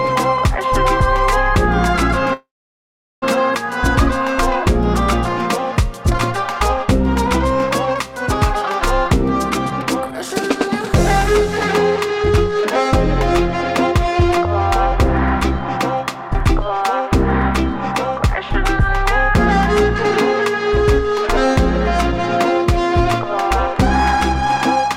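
A call audio freeze runs from 2.33 to 3.24 s, likely because packets were held up and the jitter buffer ran dry. The last sound is carried on briefly, then about 0.76 s of silence follows. The audio resumes where it stopped, with nothing lost, but everything after it is 886 ms later.

Jitter buffer speed-up follows in three stretches, each trimming short pitch-period pieces to drain the excess delay. From 9.49 to 12.92 s the audio runs at 118% speed, and roughly 0.7 s is removed. From 13.53 to 14.48 s it runs at 115%, removing roughly 0.15 s. From 15.59 to 16.78 s it runs at 107%, removing roughly 0.1 s. Pitch stays the same, but all three stretches sound hurried.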